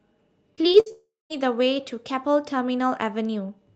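Repeated packet loss (robotic sound) runs from 0.55 to 0.92 s. Five short holes, the longest 60 ms, were each patched by stretching the previous sound, so about a third of that span is concealed. The result is choppy speech with pieces missing.

A long network dropout follows from 0.92 to 1.32 s, likely caused by audio that stopped arriving for nearly 0.4 s. The last sound is carried on as a fading buzz, then roughly 0.19 s of silence remains before speech resumes without the lost part.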